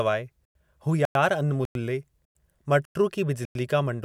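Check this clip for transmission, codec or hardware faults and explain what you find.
There's a gap between chunks problem here: the speech drops into silent holes of 100 ms at 0.45, 1.05, 1.65, 2.25, 2.85 and 3.45 s. The sound arrives in half-second blocks with a pause inserted at each join, so nothing's lost, but it stutters at hard-edged, evenly spaced breaks.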